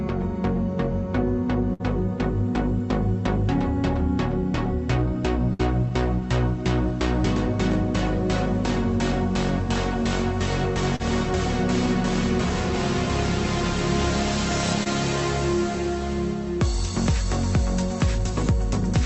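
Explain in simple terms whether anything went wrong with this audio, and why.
A burst of packet loss happens at 1.73 s and 5.53 s. About 60 ms drops out each time. The last sound is stretched and fades, then the audio jumps ahead.

Short concealed packet loss appears at 10.96 s and 14.83 s. About 34 ms and 21 ms are patched over, leaving a brief smear or wobble.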